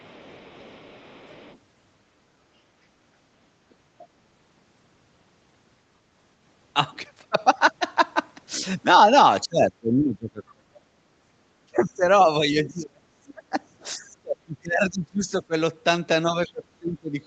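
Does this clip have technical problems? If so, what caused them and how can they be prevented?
Yes. Other side's voice leaking through appears from 0.00 to 1.58 s and in scraps at 13.28–13.33 s and 16.47–16.52 s. It is a faint second voice about 30 dB below the speech, likely loudspeaker echo the canceller missed. On a spectrogram it shows as weak, separate harmonic traces. Better speaker–microphone isolation or a headset prevents it.

Speech suppressed in double talk occurs at 9.48–10.99 s, 11.61–15.54 s and 16.29–17.16 s. Level drops by up to about 35 dB, likely as the canceller ducks the talker along with the echo. The waveform shows abrupt notches in the envelope. Headsets or a better double-talk detector prevent it.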